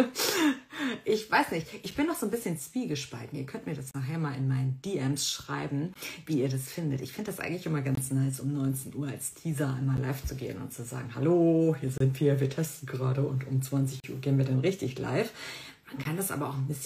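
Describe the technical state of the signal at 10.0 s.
A gap between stream segments sits at 9.97 s, just before the 10.0 s mark. Two adjacent pieces of the stream, which fits 2-second segments, carry time stamps that do not quite meet, so the player pads the mismatch with silence. The result is a hole of about 10 ms with abrupt edges, heard as a brief hard dropout in the sound. Nothing is missing from the audio itself; the material resumes exactly where it stopped.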